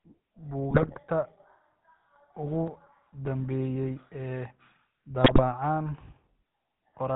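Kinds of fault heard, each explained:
GSM full-rate codec, throughout: The speech runs through the original GSM coder, which rebuilds the vocal tract from sparse, regularly spaced pulses and passes nothing above 4 kHz. That leaves a plainly audible buzzy, gravelly roughness over the whole clip, which fits 13 kbps full rate.
GSM bit errors, 0.70–0.97 s and 5.22–5.42 s: Flipped bits reach the speech decoder and corrupt its filter, pitch and gain values for a run of frames. In both spots the speech breaks into squawks, pops and gargling.
Processor overload crackle, 2.68–3.27 s: The processor falls behind and misses a string of deadlines in a row, around ten, on buffers well under a millisecond long. Each miss is simply skipped, leaving hard-edged gaps that together sound like a burst of gritty crackle that stops when the load passes.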